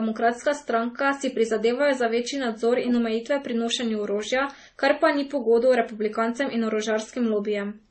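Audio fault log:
Throughout, transcoding between lossy codecs: the speech sounds dull, with nothing above 8.4 kHz, and the different coding artefacts are heard together. The likely cause is a chain of lossy encodes, which the sound suggests went MP3 at a very low bitrate, then AAC, then MP3 again. Each later encoder spent its few bits reproducing the earlier damage while adding its own, and the lowest band limit in the chain held.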